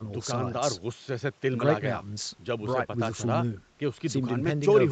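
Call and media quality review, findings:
No faults found in the speech; audio band tops out at 8 kHz, consistent with the call microphone processing and an Opus call path behaving as designed.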